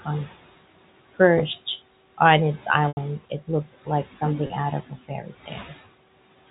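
All the way through, there's a noise suppressor at work, pulling the room noise down by about 17 dB frame by frame. That noise sat about 17 dB under the speech to begin with. You can hear the noise dip in the pauses and come back up under the talking. The speech sits inside the 4 kHz telephone band.

From 1.38 to 1.85 s there's a patch of processor overload crackle, a gritty tearing riding on top of the sound. The processor kept missing its deadlines on buffers that sound like roughly 5 ms each, dozens of them back to back. Each miss replayed a sliver of old audio with hard edges.

At 2.88 to 2.97 s there's packet loss with pitch repetition, a gap of 90 ms, which fits about three lost packets. The receiver loops the last pitch period and fades it. You get a held, buzzy tone that sinks toward silence before the speech cross-fades back in.

At 4.47 to 4.50 s a second, shorter loss of 30 ms turns up, pointing to a single packet. 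It's just a brief buzzy hold rather than a dropout.

Between 5.08 and 5.72 s there's speech cut by the noise suppressor. It mistook bits of speech for noise, around a third of a second in total, and pushed them down by as much as about 12 dB. Those parts sound swallowed and faint.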